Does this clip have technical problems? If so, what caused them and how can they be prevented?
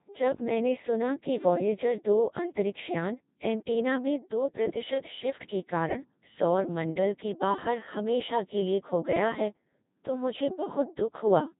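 Yes. The whole clip has gone through the Codec 2 vocoder, and it's heavily damaged. The speech comes out robotic and buzzy because the decoder rebuilds it from sine waves using only pitch, voicing, energy and a rough spectral envelope. The original waveform is never sent. Nothing is left above 3.8 kHz, and the amount of smearing fits a low mode of around 2.4 kbit/s. To prevent it, record or transmit over a wideband codec at a proper bitrate and keep digital-radio vocoders out of the chain.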